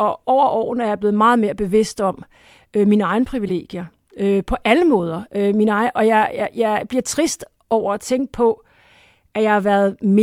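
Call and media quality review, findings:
Corrupt frame decoded, 3.48–3.50 s. Brief chirp-like blip in the speech, peaking around -20 dBFS. Decoder played one damaged frame; flipped bits misplaced spectral energy.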